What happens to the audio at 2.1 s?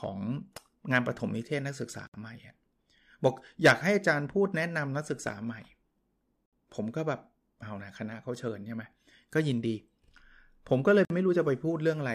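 At 2.07 s the speech breaks off in a gap of about 67 ms, resuming at 2.14 s. This is a gap at a join of encoded pieces. Separately encoded segments were joined untrimmed, leaving encoder delay and end padding in place. The edges are smeared.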